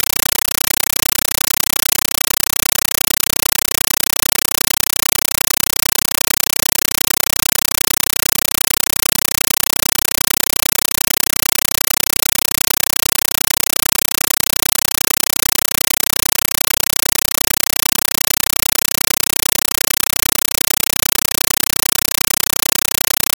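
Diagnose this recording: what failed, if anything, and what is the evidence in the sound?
The playback stage failed: a compressed Dolby Digital (AC-3) stream reached the output as if it were ordinary PCM samples, with no decoder in the path, so a compressed stream was played as audio. Throughout the clip the sound is replaced by very loud, chattering static. Each encoded frame comes out as an 8 ms burst of noise followed by silent padding, repeating at 31.25 Hz. That regular chatter fits a 384 kbps stream passed straight through an S/PDIF or HDMI link.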